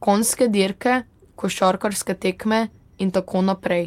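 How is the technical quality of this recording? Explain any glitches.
Nothing goes wrong technically anywhere in this recording.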